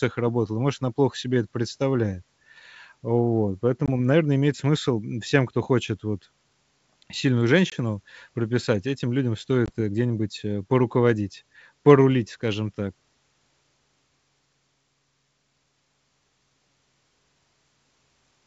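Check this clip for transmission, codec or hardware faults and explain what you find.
The speech carries packet loss on an ADPCM call at 3.86–3.89 s, 7.70–7.74 s and 9.66–9.70 s, each a gap of about 20 ms that fits a single lost packet. The decoder's predictor and step size lose track of the sender's, so each hard-edged silent hole is followed by speech that returns slightly distorted before it settles. The G.722 wideband coding around these gaps stays clear.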